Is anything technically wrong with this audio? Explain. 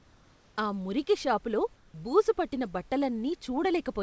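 Yes. Comfort noise in place of the background, 1.76 to 1.94 s: the sender likely stopped transmitting during this gap, and the receiver filled it with synthetic noise. For 180 ms the room's detailed background becomes a steady, featureless hiss about 2 dB quieter.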